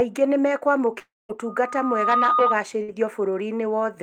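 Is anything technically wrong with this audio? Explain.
Yes, there are three separate problems.

From 0.99 to 1.31 s there's what sounds like a long network dropout. The speech breaks off, the last sound smears into a fading buzz or hiss, and then there's about 0.2 s of silence. The audio returns at 1.31 s with roughly 300 ms gone. The likely cause is a run of audio that never reached the receiver, so it filled the gap itself before giving up.

From 1.45 to 2.56 s there's loudspeaker feedback squeal. A microphone is picking up its own speaker, and at 1.2 kHz the loop gain tops one. That tone swells over about three quarters of a second into a steady howl, a bit louder than the speech.

At 2.83 to 2.90 s there's a short burst of packet loss. About 60 ms of audio went missing. The receiver held the last sound and faded it down, so you hear a brief smeared buzz or hiss before the speech jumps ahead, minus that missing slice.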